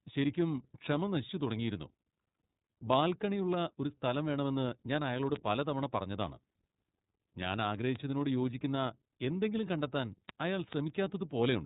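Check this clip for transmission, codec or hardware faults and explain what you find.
The clip has one fault, running through the whole of this speech recording: iLBC codec damage. Every 30 ms frame is coded independently, which fits the 13.33 kbps mode, leaving speech clear but plainly rough and synthetic. A spectrogram shows nothing above 3.8 kHz.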